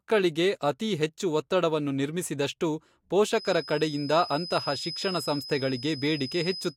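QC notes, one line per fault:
3.28 to 6.77 s, feedback whistle. A thin whistle at a single pitch of 5 kHz sits behind the speech from 3.28 s until the end of the clip. It stays roughly 15 dB below the speech and never grows into a howl. The likely cause is a loudspeaker-to-microphone loop running just short of full feedback. At that point one high frequency keeps recirculating and ringing on its own. It does not build up further.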